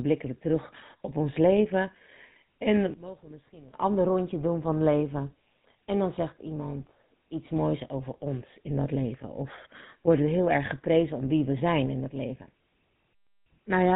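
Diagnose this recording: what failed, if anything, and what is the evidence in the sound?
The codec stage is the problem throughout. The speech has a buzzy, gravelly roughness and nothing above 4 kHz, which fits the 13 kbps GSM full-rate codec. It models the vocal tract and drives it with sparse, regularly spaced pulses, which leaves that coarse texture.

From 2.94 to 3.74 s the speech drops by about 20 dB, then returns. That's likely one channel inverted somewhere in the wiring or playback path, so the centred voice cancels on the mono sum and only the small stereo difference remains.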